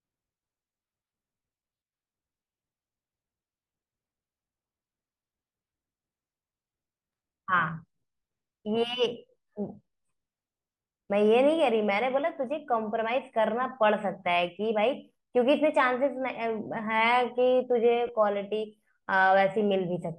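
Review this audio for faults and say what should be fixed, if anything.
Brief noisy smears break the speech at 1.64 s and from 18.07 to 18.09 s. These are lost LE Audio frames, one and then two 10 ms frames by the sound, which the LC3 decoder filled with the previous spectrum with scrambled signs. To prevent it, strengthen the Bluetooth link with less distance, less interference, or a lower-load configuration so that isochronous packets arrive on time.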